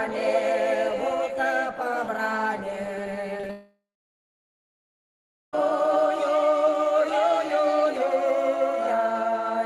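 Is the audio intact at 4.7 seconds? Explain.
No. From 3.51 to 5.55 s the sound trails off into a fading buzz or hiss, then silence by 4.7 s, likely a long network dropout losing about two seconds.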